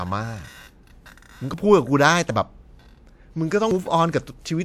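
At 1.54 s the speech jumps forward with no gap. About 40 ms is missing, and the two sides butt straight together. The same skip recurs at 2.30 s, again about 40 ms. At 3.71 s a longer stretch, about a tenth of a second, vanishes. The likely cause is a dropped buffer (overrun): the capturing program fell behind, and the hardware overwrote samples before they were read.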